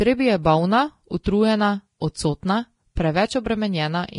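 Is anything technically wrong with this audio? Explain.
Yes. Throughout, the speech sounds hissy and grainy, with nothing above about 10.6 kHz, likely from heavy Vorbis compression at a low bitrate, which fits roughly 31 kbps. At 1.24 to 1.26 s, a 21 ms pre-echo puts a short hiss before an attack, as block-spread quantisation noise leaks ahead of it.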